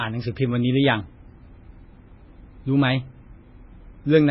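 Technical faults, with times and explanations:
Throughout, MP3 compression: likely a very low bitrate near 16 kbps, with treble cut flat above 5.6 kHz and weak bands flickering in and out, making speech watery; the spectrogram shows a hard ceiling and patchy holes.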